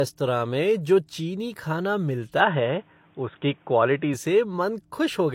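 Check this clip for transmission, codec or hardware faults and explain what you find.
Two faults are present: one throughout the speech, one in the middle.

Throughout, the first encoding's artefacts remain, with nothing above 16.3 kHz, likely low-bitrate audio saved at a high bitrate, so the earlier encoding's losses persist.

From 2.4 to 4.14 s, the speech turns dull and boxy, capped at 3.7 kHz, about 5 dB different in level, with new noise about 40 dB down, likely an input switched to a poorer device.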